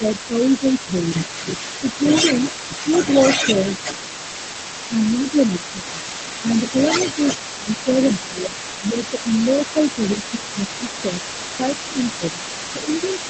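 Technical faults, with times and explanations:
0.0–2.05 s, 4.89–10.83 s and 11.59 s to the end: speech suppressed in double talk, with dips of up to about 10 dB (about 5 dB at the end) only while the other side talks, likely from the echo canceller turning both down.
throughout: other side's voice leaking through, a separate voice roughly 10 dB under the talker, likely from uncancelled loudspeaker echo. Unlike reverberation, it carries different speech.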